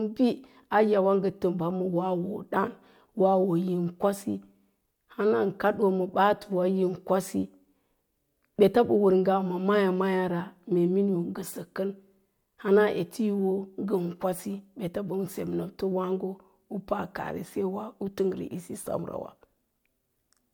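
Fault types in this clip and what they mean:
No technical fault can be heard in the signal at any point; it stays continuous and steady throughout.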